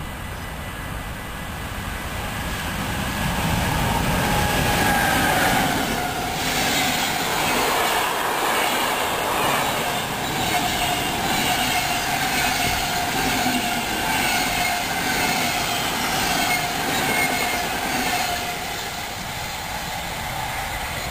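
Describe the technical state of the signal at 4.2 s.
At 4.18 s there is a single sharp click, likely dropped samples: well under a millisecond of the stream is missing, so the waveform jumps abruptly.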